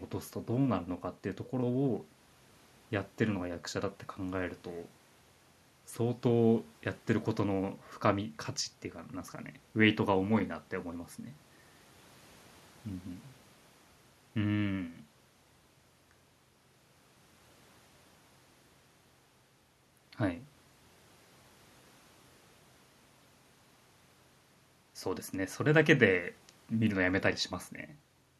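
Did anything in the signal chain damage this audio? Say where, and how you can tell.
No, nothing along the signal chain can be heard damaging this speech recording at any stage.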